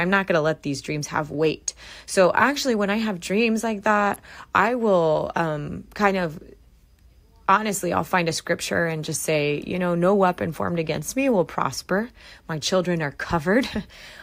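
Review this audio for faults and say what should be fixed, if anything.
At 4.14 s an electrical switching spike cuts into the speech as a sharp snap or tight cluster of clicks peaking around -20 dBFS, likely an arc from a nearby switch or motor coupling into the audio line. On a waveform it's a narrow isolated spike; a spectrogram shows a thin vertical line spanning all frequencies. Prevent it by routing audio cables away from switched mains and motors, using balanced lines, and fitting suppression on noisy switches.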